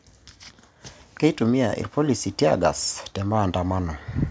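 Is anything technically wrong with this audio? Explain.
Yes. From 1.94 s to 4.04 s the speech and the background swell together, growing about 4 dB louder over two seconds. This is automatic gain rising: the gain control judged the input too quiet and gradually raised its gain, lifting everything it passed, consistent with the call microphone processing the audio went through, which leaves nothing above 8 kHz.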